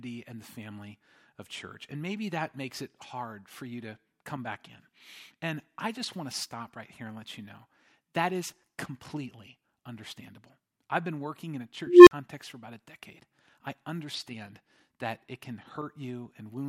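At 11.87 s, after "been working in a", an unstable filter blows up. A tone of roughly 400 Hz swells over 200 ms, clips, then drops to about 43 ms of silence until 12.11 s, before "for about a decade". Unlike acoustic feedback, it ends in sudden silence.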